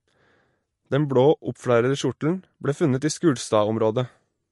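Throughout the speech, MP3 compression damage is plainly audible: nothing remains above about 11.3 kHz, where the encoder likely cut the treble to save bits. S sounds turn watery and swirly, and a spectrogram shows a flat ceiling with speckled, flickering holes below it.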